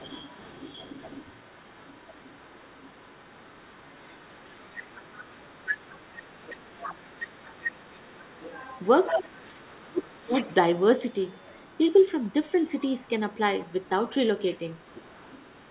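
From 0.0 to 9.67 s a faint second voice sits about 20 dB under the speech. This is the other side's voice leaking through, likely loudspeaker echo the echo canceller left in the microphone signal. At 6.7 s the speech briefly dips by about 10 dB. From 7.13 to 8.34 s and from 9.14 to 10.47 s it sinks by up to about 25 dB. This is speech suppressed in double talk, likely the canceller turning everything down while both sides talked at once. The leaking voice then returns more faintly, about 30 to 35 dB down, from 10.0 to 12.52 s, 13.03 to 13.34 s, 13.65 to 14.09 s, and from 14.55 s to the end.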